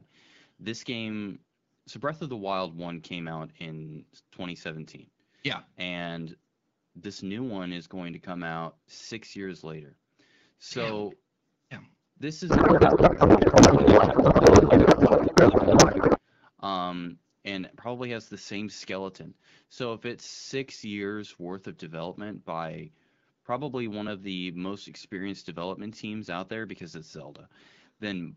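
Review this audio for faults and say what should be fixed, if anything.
From 12.49 to 16.19 s the speech turns into garbled noise and warble, a codec payload misread that fits octet-aligned AMR frames being unpacked as bandwidth-efficient. Because the bit fields are read from the wrong positions, the decoder produces sound that barely follows the speech. On a spectrogram, the harmonic bands break into smeared, unstructured energy until 16.19 s. Both ends should negotiate and use the same AMR packing mode.

An underrun with held sample occurs at 13.60 s (inside the garbled stretch) and again at 24.08 s, lasting 0.73 ms and 1.45 ms. The output buffer ran dry and the converter held its last value. On the waveform, this appears as a tiny flat segment at a non-zero level, and playback resumes where it stopped, so there is little click. A larger output buffer or steadier feeding would prevent it.

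The AMR wideband (HD Voice) codec at 12.65 kbit/s leaves only light coding damage.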